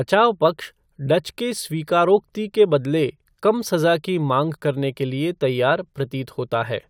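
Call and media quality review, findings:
Nothing to flag on this speech recording, no faults turned up anywhere in it.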